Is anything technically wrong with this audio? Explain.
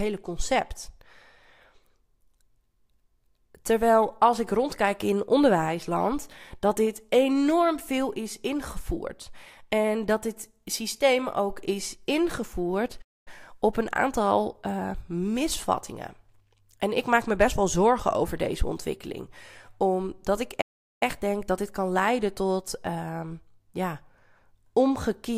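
Yes, the speech cuts out twice. A playback stall at 13.01 to 13.28 s, after "systeem ook is ingevoerd", silences the audio for 0.24 s before "op een aantal eh". Another at 20.61 to 21.03 s drops out for 0.40 s before "denk dat dit kan". The likely cause is the player running short of data or its thread being blocked, so output halts mid-flow and resumes abruptly.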